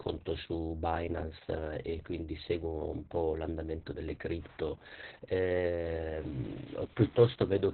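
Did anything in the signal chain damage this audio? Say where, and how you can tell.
Yes, at the codec stage: this speech shows heavy Opus voice compression from start to finish. There is no energy above about 4.3 kHz, so the voice sounds muffled and boxed-in, and it carries a hoarse, slightly robotic buzz. That fits Opus running its SILK linear-prediction coder in narrowband mode at a very low rate, around 6 kbps with long 60 ms frames, where the excitation is coded coarsely and the upper band is discarded.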